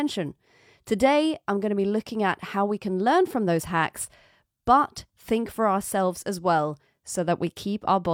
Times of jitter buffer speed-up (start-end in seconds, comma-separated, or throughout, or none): none